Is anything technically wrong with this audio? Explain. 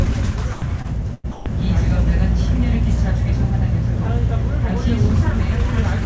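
Yes, there are three kinds of fault in the first second and a half, all on a call path whose content stops at 8 kHz, which fits wideband G.722.

Sound dropped by the voice detector, 0.54 to 0.62 s and 1.32 to 1.46 s: the sound cuts out for 80 ms and then 140 ms and is replaced by steady, featureless noise. The likely cause is the sender's voice detector judging the sound to be background and pausing transmission while the receiver generated comfort noise. On a spectrogram each gap is a flat, even wash with the sound's structure missing. The waveform drops to a low, uniform band.

Short concealed packet loss, 0.82 to 0.86 s: about 20 ms of audio never arrived in time. The receiver stretched the preceding sound over the hole for about 23 ms and then crossfaded back, giving a brief smear or wobble. A spectrogram shows a short stretch where the frequency content is frozen or slightly blurred. 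The waveform looks repetitive there instead of continuing naturally.

Burst of packet loss, 1.14 to 1.26 s: about 100 ms of audio is missing. The receiver extended the last sound for about 95 ms and turned it down as it went, so it becomes a held, fading buzz or hiss before the audio resumes further along. On a spectrogram the last frame's pattern smears horizontally and dims. The waveform's envelope tapers, then jumps back.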